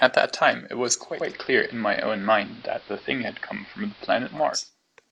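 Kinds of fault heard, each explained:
Digital radio blending to analogue: from 0.96 to 4.71 s the speech turns dull, with hiss about 25 dB below the speech, as the receiver cross-fades over 393 ms to AM.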